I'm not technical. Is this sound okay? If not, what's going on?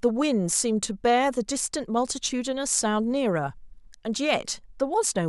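No. At 2.28 s there is a block of digital silence, a sliver of about 0.17 ms where the sound drops out. It's too brief to hear as a gap, so it comes across as a tick or dip.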